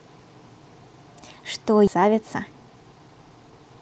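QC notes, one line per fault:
1.87–1.89 s, skip ahead: playback jumps forward with no filler, so about 0.7 s of speech is simply gone and the sound on either side of the cut is butted together almost directly. A run of audio was discarded while later packets were already queued, either lost on the way or dropped when the jitter buffer overflowed, so the receiver resumed from the newer material instead of playing the missing stretch and the delay shrank by roughly the same amount.
1.97 s to the end, jitter buffer speed-up: speech plays at about 112% of its normal rate with the pitch unchanged, so the closing stretch sounds hurried. The buffer sat above its target depth and trimmed it down by cutting out short pieces of one or a few pitch periods repeatedly, about a fifth of a second in all, under the ordinary Opus coding at 40 kbps with its 8 kHz audio bandwidth.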